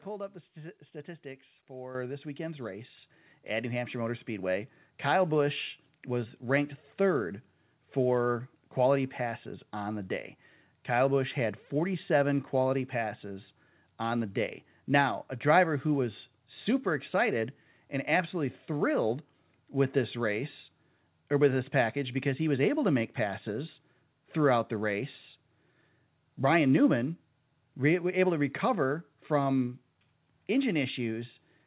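Speech whose level jumps abruptly twice, voice and background together, at 1.95 s by about 9 dB just before "this weekend's" and at 2.97 s by about 5 dB right after it: microphone volume stepped up, the call software raising the input gain in single steps. The call path's band limit at 4 kHz fits G.711 mu-law.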